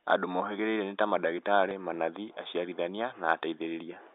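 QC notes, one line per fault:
1.69–1.71 s, packet loss with last packet repeated: about 20 ms of audio never reached the receiver, which fits two 10 ms packets, so it filled the gap by replaying the last good packet. The repeated copy gives a brief robotic stutter with a 100 Hz repeat just before "manathi aciarithania", heard through the narrow 300–3700 Hz G.711 telephone line band.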